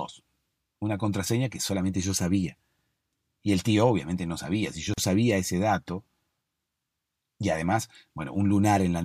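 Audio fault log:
4.94–4.98 s, gap at a join of encoded pieces: the speech drops into a gap of about 41 ms with smeared edges, then resumes at "sabía ese dato". Separately encoded segments were joined without trimming their start delay and end-frame padding.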